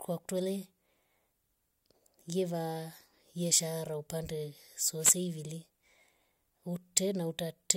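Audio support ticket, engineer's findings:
Short swish of static over the speech, 4.99–5.17 s (about 0.18 s), right after "yeshara upande". Wireless microphone noise hit: analogue FM radio link fading as reflections cancel, receiver noise rising.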